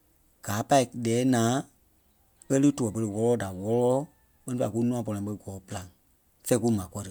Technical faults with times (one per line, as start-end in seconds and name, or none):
none